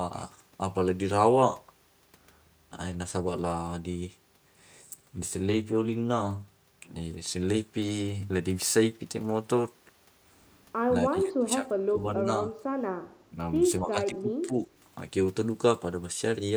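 From 11.1 to 12.03 s the speech sinks deeply, by roughly 30 dB at its lowest. Shorter, shallower dips of around 10 dB follow at 12.44 to 12.54 s and 13.3 to 13.35 s. A further stretch from 13.8 to 14.67 s drops by around 15 dB. The pattern is likely speech suppressed in double talk: with both ends talking, the echo canceller attenuated the near talker along with the echo.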